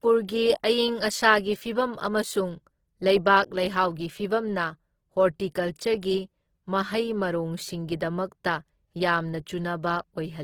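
Speech runs the whole way through with plainly audible Opus compression damage, likely from a low bitrate near 16 kbps in its music mode. Bandwidth stays full to about 20.2 kHz, and the texture turns rough, noisy and grainy rather than swirling or hollowed out as MP3 would.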